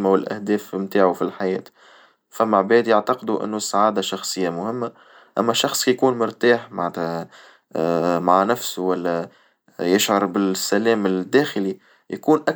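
No technical faults can be heard anywhere in the speech. The sound holds steady across the whole recording, with nothing at any point to single out.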